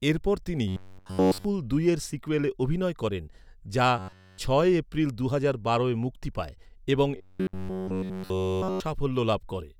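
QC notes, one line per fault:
0.68–1.45 s, 3.99–4.38 s, 7.17–8.80 s: robotic sound from repeated short buffers. The speech turns into a rigid metallic buzz locked at 93.8 Hz, likely from one roughly 10.7 ms slice replaying while nearly all new audio is skipped. Unlike a dropout, the words' rough outline persists.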